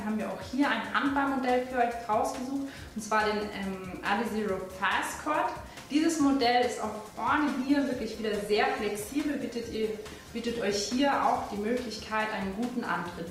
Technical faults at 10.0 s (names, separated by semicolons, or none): call bitrate drop